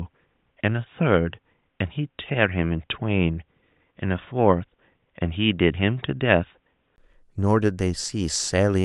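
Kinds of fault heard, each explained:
Input switched to a poorer device: from 0 to 6.98 s the speech is band-limited below 3.8 kHz, dull and boxy, likely from a lower-quality microphone, with a brief 20 ms gap at the switch.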